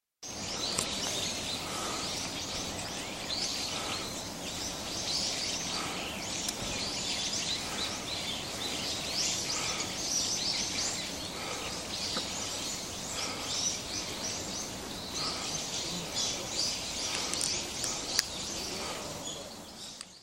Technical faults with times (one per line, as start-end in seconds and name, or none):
none